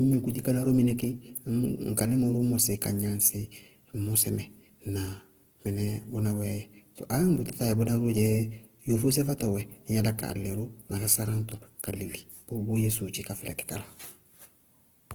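Speech runs for the whole clip under plainly audible Opus compression, likely from encoding in its CELT music mode at a low rate, which fits about 16 kbps. The band structure stays intact and content reaches roughly 20.2 kHz, so there are no obvious holes or swirling. Instead, band energies are kept while the detail inside them is filled by folding or noise, leaving voiced sounds rough, grainy and noisy throughout.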